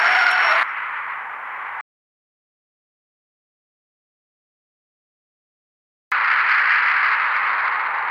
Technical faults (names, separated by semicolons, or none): audio dropout to silence